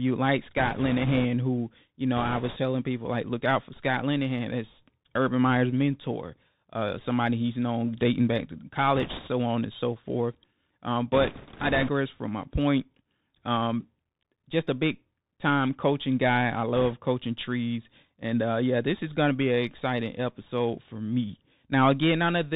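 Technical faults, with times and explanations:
Throughout, Bluetooth CVSD headset codec: the speech sounds thin and boxed-in, with nothing above 4 kHz. A granular hiss sits under it, s sounds turn scratchy, and loud, bright syllables smear into distortion. The encoder sends one bit per sample saying only up or down, which fits a 64 kbps headset stream. Its adaptive step cannot keep up with fast, loud high-frequency movement, so the waveform lags and grinds.
0.57–1.25 s, 2.17–2.57 s, 8.95–9.29 s, 11.12–11.91 s and 16.75–16.94 s, bit errors on a Bluetooth voice link: a rushing, crackly noise washes over the speech without any sharp clicks. The first burst ends just before "who you know", and the second falls between "who you know" and "telling people like look". The fourth leads into "from my point". Bits on the headset link were flipped, a few percent of them. Each bit moves the signal by only one adaptive step, which grows with the speech level, and the error fades, so the result is crackle rather than pops.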